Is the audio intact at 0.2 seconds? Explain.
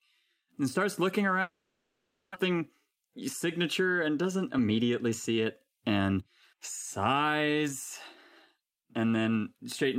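Yes, at 0.2 seconds the speech plays through cleanly, with no audible dropout, click, distortion or other fault at that moment.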